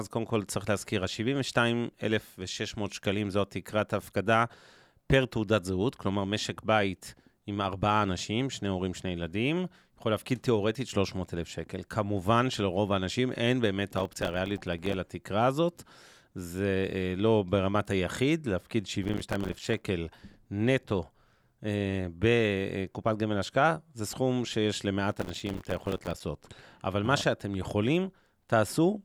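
Speech, with processor overload crackle in three bursts, at 13.96 to 14.94 s, 19.03 to 19.81 s and 25.12 to 26.20 s. The processor repeatedly misses its buffer deadlines, so tiny buffers of a few milliseconds each fall silent, dozens to over a hundred per burst, the last being densest. Their hard edges make a gritty tearing. Unlike a single dropout or clipping, it is a rapid chain of gaps that stops when the load eases.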